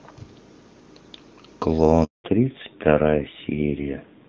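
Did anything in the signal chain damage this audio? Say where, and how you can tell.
Yes. A handover gap at the network stage: the speech dies away at 2.04 s and stays silent for 200 ms until 2.24 s, because no frames arrived while the call switched networks.

From 2.24 s to the end, a fallback to narrowband at the codec stage: everything above 4 kHz disappears and the speech turns duller and rougher, as the call drops from HD Voice to an older narrowband codec.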